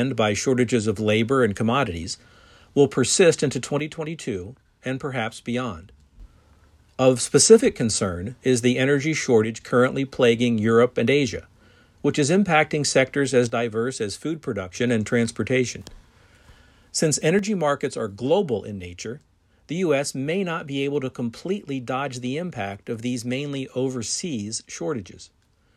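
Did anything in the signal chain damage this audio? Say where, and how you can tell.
Yes. The speech level falls abruptly by about 6 dB at 3.80 to 6.20 s, 9.44 to 9.61 s, 13.50 to 14.75 s, and from 17.39 s to the end, with no other change in tone. That is most likely one channel dropping out, probably an intermittent cable or connector in the analogue wiring. With both sides carrying the same sound, losing one leaves the mono sum 6 dB down until it reconnects.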